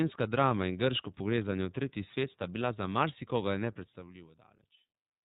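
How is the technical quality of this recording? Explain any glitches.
The recording's quality is limited by one fault that runs through the whole speech clip.

iLBC codec, from start to finish: each frame's excitation is coded on its own, and the framing fits the 30 ms, 13.33 kbps mode. Nothing above 4 kHz survives, so the speech sounds muffled, a little rough and plainly synthetic.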